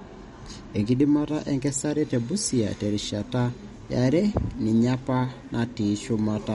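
From start to finish the speech carries plainly audible MP3 compression artefacts, and the likely cause is a low-bitrate MP3 encode, consistent with roughly 48 kbps. Nothing is present above 11.2 kHz, where the encoder has cut the treble to save bits. Below that, weak frequency components flicker on and off between frames, giving the audio a watery, swirling texture, with metallic chirps on s sounds and smeared consonant onsets.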